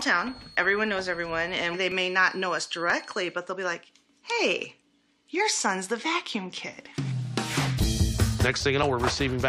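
A loudspeaker-to-microphone loop likely sitting at the edge of feedback produces a feedback whistle from 0 to 3.4 s: a thin 4.3 kHz tone that swells and fades slowly, roughly 25 dB under the sound. Overlap between stream segments, where the player trims audio it wrongly treats as doubled, causes small clicks or skips at 1.92, 2.90, 6.85, 7.84 and 8.83 s, at boundaries between one-second segments.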